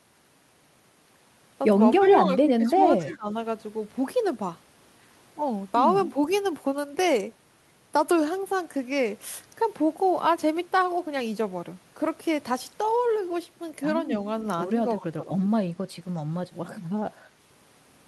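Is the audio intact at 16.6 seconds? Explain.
Yes, at 16.6 seconds the speech plays through intact, with no audible fault at that moment.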